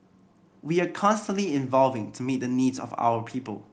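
No faults are present anywhere in the recording.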